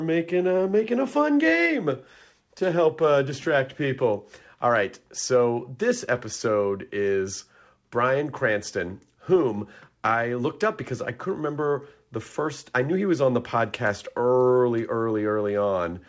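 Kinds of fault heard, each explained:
No faults are present: the speech comes through a call path that is working as expected, with nothing above 8 kHz, a band limit that fits a wideband codec such as G.722 at 64 kbps.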